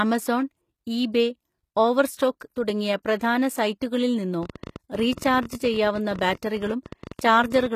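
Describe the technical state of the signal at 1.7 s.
HE-AAC compression is present at 1.7 s, as throughout: the plainly audible codec damage and the cut above 14.9 kHz likely come from treble rebuilt by spectral band replication, consistent with about 20 kbps.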